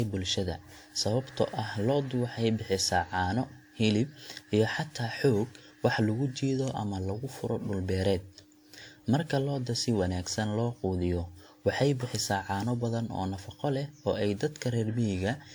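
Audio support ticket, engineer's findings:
Speech swirly, hollow and smeared throughout, with blurred attacks. Likely generation loss: about five lossy re-encodes, consistent with WMA at 96 kbit/s, each requantising on a shifted frame grid. Unlike one low-bitrate encode, the band still reaches 20.1 kHz.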